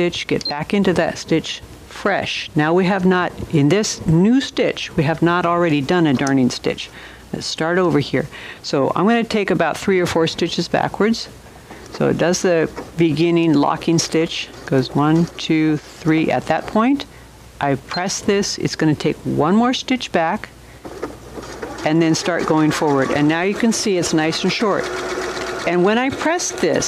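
Nothing stood out as a technical fault on listening to this audio.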